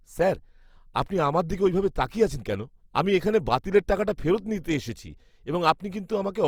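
Opus compression runs throughout the speech: every band keeps its energy, but with too few bits the upper ones are filled by folding or noise, so the sound turns grainy and rough instead of swirly. This likely comes from Opus's music mode at around 24 kbps.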